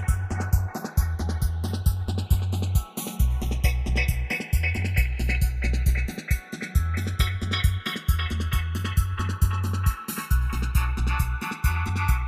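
Throughout, the channels are drifting apart: they come from devices on separate clocks, so the delay between them slides steadily, reaching about a millisecond by the end, which points to clocks roughly 70 parts per million apart. Summed to mono, the sound takes on slow flanging.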